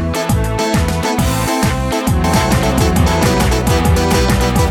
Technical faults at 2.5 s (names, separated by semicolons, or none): doubled audio track